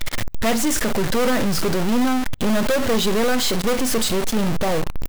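Throughout, the speech carries harsh, buzzy distortion and noisy pauses, likely from a stuck bit throwing about half the samples off by steps of about -20 dBFS.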